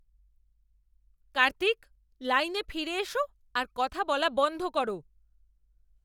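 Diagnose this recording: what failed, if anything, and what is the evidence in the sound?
Nothing stood out on listening to the speech recording that would point to a failure at any stage of the chain.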